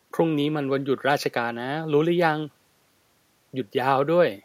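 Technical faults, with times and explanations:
Nothing stood out as a technical problem on listening to this speech recording.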